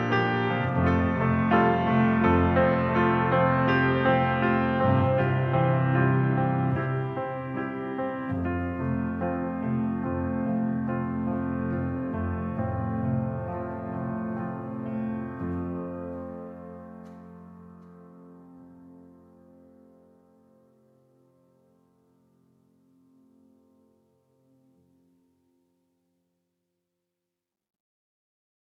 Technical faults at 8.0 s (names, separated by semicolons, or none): none